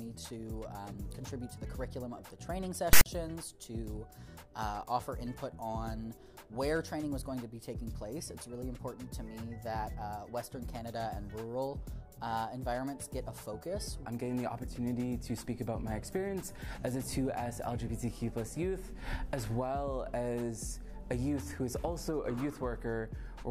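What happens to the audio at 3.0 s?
A harsh, loud rasp with hard edges cuts in from 2.93 to 3.06 s, pushed off to one side and dropping to dead silence before it ends. This is file tags played as audio: a block of text metadata and its zero padding was read as samples.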